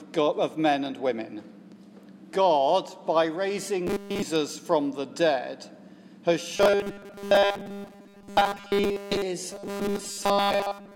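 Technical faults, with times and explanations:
3.87 to 4.22 s, robotic sound from repeated short buffers: new audio likely stopped arriving in time, so a fragment of about 5 ms was looped over essentially the whole stretch. That loop imposes a rigid 200 Hz buzz, turning the sound metallic and mechanical.
6.57 to 9.22 s, robotic sound from repeated short buffers: most of this span is again filled by likely looping of a roughly 5 ms fragment, producing the same 200 Hz metallic buzz.
9.51 s to the end, robotic sound from repeated short buffers: after a brief recovery the likely buffer starvation returns, with most of the audio replaced by the repeated fragment and the fixed 200 Hz buzz lasting until the clip ends.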